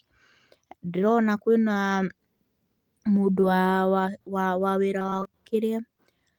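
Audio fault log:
1.73 s and 3.41 s: short concealed packet loss, about 20 ms of audio arrived too late each time, and the decoder bridged it by extending the preceding sound, leaving a brief smear or wobble.
4.99 to 5.27 s, just after "wa wa": repeated packet loss (robotic sound), eight separate gaps of up to 20 ms within that stretch were each patched by extending the last sound, about 43% of it synthetic, so it turns choppy, with pieces missing.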